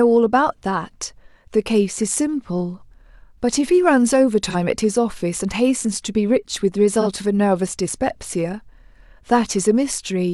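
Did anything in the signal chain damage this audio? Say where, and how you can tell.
Yes. The damage happened at the codec stage, as AAC frame loss with concealment. The speech has two brief smeared, noisy patches, at 4.49 to 4.56 s and at 7.01 to 7.07 s. Each gap is about 43 ms, which fits the loss of a single AAC frame. The decoder had no data for that span. It filled the hole by reusing the last good spectrum with altered phase and energy. That substitute sounds blurred and phasey rather than silent.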